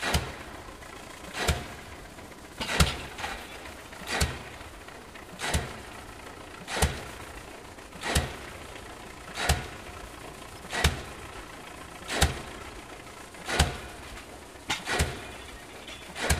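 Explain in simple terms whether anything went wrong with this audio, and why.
Three brief glitches cut into the sounds here, each heard as a short out-of-place chirp, squeak, blip or burst of noise: one from 3.98 to 4.13 s, another from 11.64 to 11.68 s, and a last at about 12.71 s. Each is a corrupt frame decoded. The audio was stored as compressed chunks, about eleven of those chunks were damaged, and the player played them anyway, putting sound at the wrong pitches for those instants.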